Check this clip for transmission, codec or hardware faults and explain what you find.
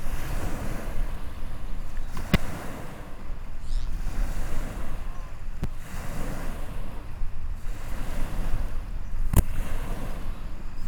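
The clip has one fault type, corrupt frame decoded, heard three times in this everyday sound recording. The bursts fall at 2.32–2.36 s, 5.62–5.65 s and 9.33–9.40 s. Damaged compressed frames were decoded anyway. Misread gains and codes throw energy into wrong frequencies. Each burst is a brief chirp or noise blip, near -10 dBFS at the first and last, about -20 dBFS in the middle. Each span suggests a few bad frames.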